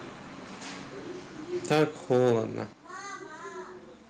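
From 1.71 to 1.84 s the speech breaks into a harsh, crackling edge, likely microphone overload. The peaks drive about 11 dB past the converter's ceiling, so roughly a tenth of the waveform is squared off flat. At 1.74 s, inside that burst, the whole level drops by about 3 dB at once, likely the microphone volume being stepped down by the call software reacting to the overload. The background falls by the same amount as the speech, and the change is instantaneous. A gentle automatic gain ride would instead glide over a syllable or two.

A second overload runs from 2.11 to 2.33 s. The peaks are about 5 dB over, so it sounds milder but lasts longer, with a smaller share of samples cut off. What marks it as clipping rather than codec distortion is that the grit follows the loudest moments and disappears in quieter stretches. At 2.73 s comes a larger step of about 7 dB down, again affecting speech and background alike. 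It leaves everything after it noticeably quieter.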